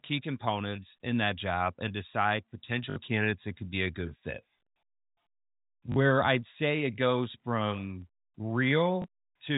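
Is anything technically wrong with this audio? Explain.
Yes. Packet loss with the last packet repeated occurs three times: 2.90 to 2.96 s, between "that job and decide" and "candidates that could be"; 5.92 to 5.96 s, just before "I'd say it goes"; and 9.02 to 9.04 s. Each gap is 60, 40 and 20 ms, which fits lost 20 ms packets. The receiver replayed the previous packet to fill each gap. The longer runs buzz at about 50 Hz, giving a brief robotic stutter.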